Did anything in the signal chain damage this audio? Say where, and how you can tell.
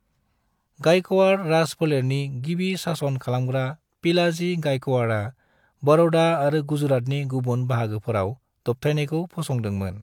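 No, nothing along the way seems to have damaged this speech recording, and there's nothing in it that points to trouble at any stage.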